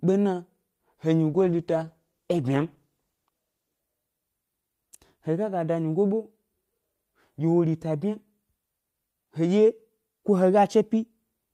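Speech clip with a call bitrate drop from 1.31 to 3.87 s: the sound goes coarse and muffled, losing its top end, which fits the encoder falling from around 64 to 14 kbps.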